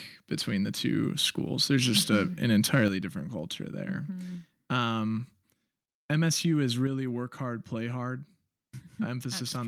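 From 1.96 to 2.16 s, and again from 2.53 to 2.87 s, the loudest speech turns harsh and crackly. This is microphone overload. The input gain was likely set too high, so the peaks rose about 7 dB and then about 3 dB past the converter's ceiling, and their tops were cut flat.

At 2.88 s, just before "different culture there", the voice and the background fall together by about 7 dB. This is the microphone volume stepped down, likely by the call software reacting to the clipping. It happens again at 6.87 s, by about 5 dB, just before "work hard play hard".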